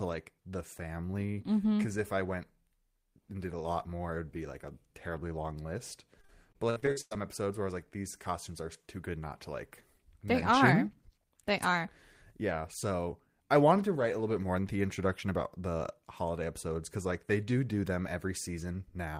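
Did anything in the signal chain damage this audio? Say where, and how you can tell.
Yes. From 6.21 to 7.13 s the speech turns choppy and robotic, with eight separate holes, the longest about 101 ms. About a third of that stretch is smeared filler that stretches the preceding sound, and another 340 ms or so is simply missing. This is repeated packet loss on the network stage: packets kept arriving late or not at all, and concealment patched each hole by continuing the last sound until the next loss.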